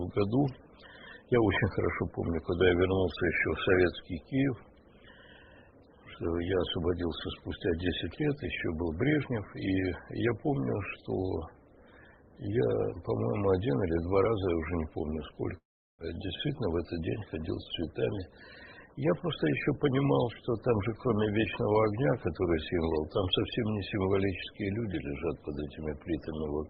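From 15.57 to 16.03 s the sound breaks into a buzzy continuation of the last sound that fades away, leaving about 0.36 s of silence. This is likely a long network dropout: packets stopped arriving, the receiver concealed the gap, and about 400 ms of audio was never played.

From 16.66 to 17.01 s comes a jitter buffer speed-up. The receiver, holding excess buffered audio, trims short pitch-period pieces, around 50 ms in total, so the sound runs at 114% speed with unchanged pitch and feels briefly hurried.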